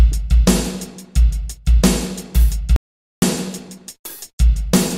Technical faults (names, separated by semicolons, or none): audio dropout to silence